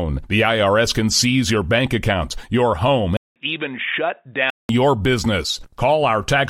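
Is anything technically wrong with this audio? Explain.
Yes. From 3.17 s to 4.69 s the speech turns dull and boxy, with nothing above 3.8 kHz, a faint new noise floor well under the signal and a few dB less level, after a 191 ms silence. This is likely the input switched to a poorer device, whose narrower band replaces the original microphone until it returns.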